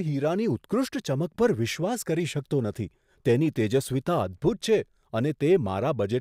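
Nothing faulty turns up anywhere in this speech recording. The audio runs its full duration without a single audible technical problem.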